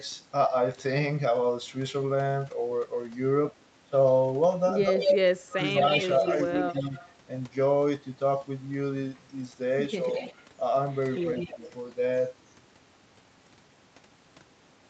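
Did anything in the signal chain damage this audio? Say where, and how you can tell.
Yes. Speech suppressed in double talk, at 4.85 to 6.95 s, 10.04 to 10.2 s and 11.54 to 11.58 s, happens in the call processing stage. The first stretch loses well over half a second, dipping by about 20 dB. The later two dip by about 5 dB. This is likely an echo canceller turning down the near talker while the far side spoke.

Echo leak, at 4.99 to 7.13 s and 9.16 to 11.72 s, shows as a delayed copy of the speech trailing by 180 ms and then 188 ms. The first copy is about as loud as the speech, the second about 15 dB lower. It likely comes from a loudspeaker whose echo canceller let microphone pickup through.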